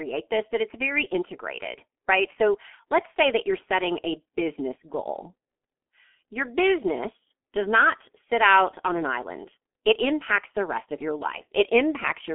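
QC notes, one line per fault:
Throughout: G.723.1 codec. The speech is muffled and hoarse, with nothing above about 3.6 kHz and a 250 Hz to 3.4 kHz phone band. The damage is heavy. Consonants smear because the voice model updates slowly in coarse frames, which fits the 6.3 kbit/s mode.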